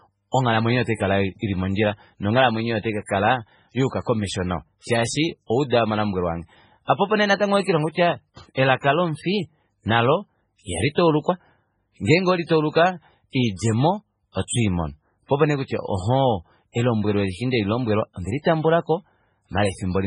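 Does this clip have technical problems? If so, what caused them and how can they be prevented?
Yes. Throughout the speech, nothing remains above 10.4 kHz, and quiet detail swirls and warbles as weak frequency lines drop in and out. This heavy damage is likely MP3 compression at a very low bitrate, around 16 kbps. Encode at a higher bitrate to prevent it.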